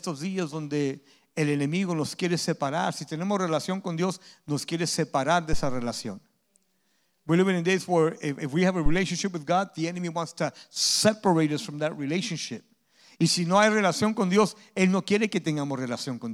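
At 5.53 s, just after "nos quiere separar de", a phantom power thump lands: a deep low-frequency bump peaking at about -13 dBFS and dying away over roughly 100 ms. A second follows at 8.86 s, after "if we have a", peaking at about -11 dBFS with a quicker 28 ms decay. Each is a supply voltage switching on a live input, its step pushed through the coupling capacitors. On a waveform these are large one-sided swings; a spectrogram shows dark energy confined to the bottom bins.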